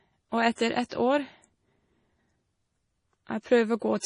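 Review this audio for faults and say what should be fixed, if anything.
MP3 compression runs throughout this speech: nothing reaches above 10.5 kHz, and the heavy watery smearing likely comes from an encoder short of bits, consistent with a very low bitrate near 32 kbps.

Pre-echo appears from 0.53 to 0.58 s and from 0.86 to 0.92 s. Quantisation noise spread across a transform block leaks as hiss 55 and 56 ms ahead of the attacks.

To prevent both, keep an uncompressed or high-bitrate master and re-encode at a much higher bitrate, so the encoder keeps the treble and can switch to short blocks around sharp attacks.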